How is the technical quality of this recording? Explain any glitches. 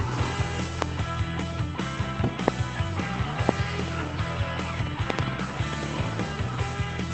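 The recording is marred by loud pops. They come at 0.82–0.84 s, 2.48–2.50 s and 3.49–3.51 s, each a single pop about 25 dB above the surrounding sound, then a double pop at 5.10–5.21 s, about 20 dB above it. Each is likely a voltage step or pulse from a plug, switch, static or driver glitch. The circuitry shapes it into a sharp thump while the sound continues underneath. A waveform shows tall narrow spikes; a spectrogram shows thin full-height vertical lines, two close together near 5.1 s. The audio also carries call-codec coding noise and tops out near 8 kHz, which fits an Opus call path at about 20 kbps.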